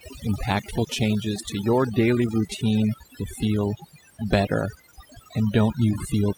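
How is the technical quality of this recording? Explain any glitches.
The main problem is overdone noise removal, running through the whole speech clip. The noise reduction was set too aggressively, so frequency bands near its noise estimate get pulled right down, taking quieter voice detail with them. The background drops and breaks up into twinkly specks.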